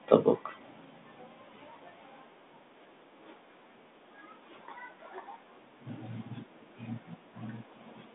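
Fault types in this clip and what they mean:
The speech sits in a narrow telephone band running from about 200 Hz up to 3.6 kHz with nothing above 3.8 kHz, and the only coding texture is a light grain that fits a 32 kbit/s telephone coder working normally.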